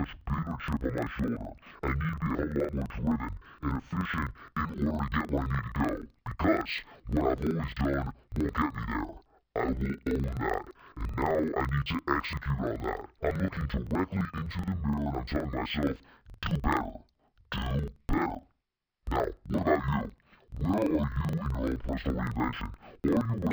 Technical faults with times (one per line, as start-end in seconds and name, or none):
0.00-23.52 interleaved audio read as planar